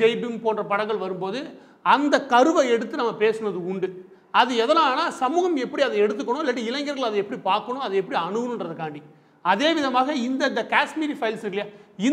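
No technical faults are audible anywhere in the clip.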